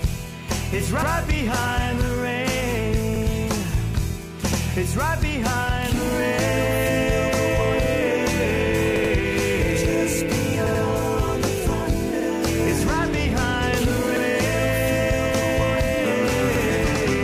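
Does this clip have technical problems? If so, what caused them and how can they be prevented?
Yes, there's a repeated buffer problem here. At 1.02, 3.16, 4.52, 8.96, 10.67, 12.20, 14.17 and 16.56 s, a chunk of about 85 ms plays again with a hard join, producing a short stutter. At 8.96 and 10.67 s it plays twice over. The chunk length fits a 4096-sample buffer: new audio wasn't ready in time, so the device just replayed the last one. Giving the audio thread more headroom, with a bigger buffer or higher priority, would prevent it.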